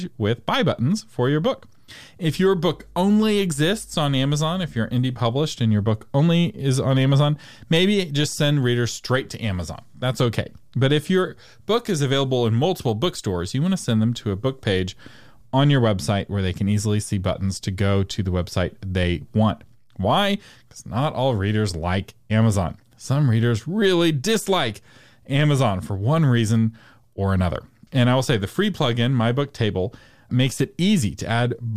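Speech, with mains hum entering from 2.26 s to 4.96 s: a steady low tone at 50 Hz, sitting roughly 25 dB below the speech. A ground loop or a nearby transformer is letting the power line leak into the signal. What separates it from low-frequency rumble or wind noise is its fixed, clearly pitched quality: the hum holds one unwavering frequency rather than a shifting, broadband low-end wash.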